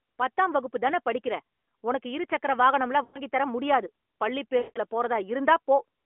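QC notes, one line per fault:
3.04–3.21 s and 4.58–4.79 s, lost AMR speech frames: the sound smears into a drawn-out hold and sags toward silence, for about 100 ms and then about 180 ms, with the longer gap fading almost fully before the audio returns thin and rough. Corrupted radio frames were discarded, and the narrowband AMR decoder kept reusing the last good pitch and vocal tract settings at steadily falling gain until valid frames arrived.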